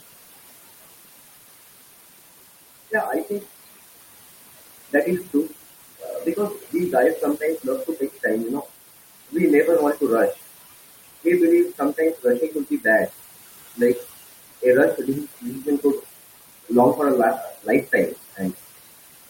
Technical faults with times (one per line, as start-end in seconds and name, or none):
0.00-19.30 noise suppressor artifacts
4.93-5.53 speech cut by the noise suppressor
6.00-8.24 speech cut by the noise suppressor
8.61-8.71 speech cut by the noise suppressor
11.78-13.11 speech cut by the noise suppressor
15.41-16.05 speech cut by the noise suppressor
17.49-18.57 speech cut by the noise suppressor